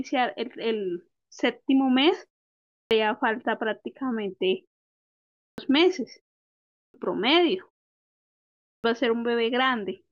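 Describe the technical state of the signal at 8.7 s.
The output device went to sleep during the roughly 1.05 s pause before 8.67 s and had not woken and locked again when sound resumed. The result is a clipped start after a pause. From 8.67 s to 8.84 s, about 169 ms of the returning speech is swallowed, so the next word bursts abruptly out of silence with its opening sounds missing rather than rising in naturally.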